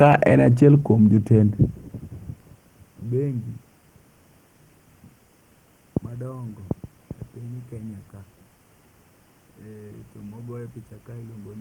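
No technical faults are audible anywhere in this speech.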